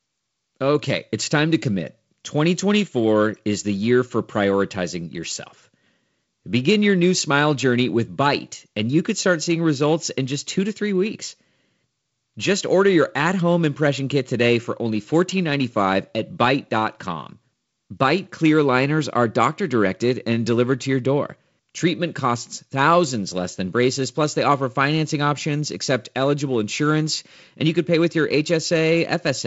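No technical faults can be heard anywhere in this recording.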